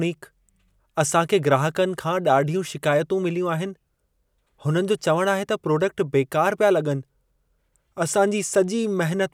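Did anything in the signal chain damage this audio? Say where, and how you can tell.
No, nothing in this speech recording stood out as damage from any stage of the signal chain on listening.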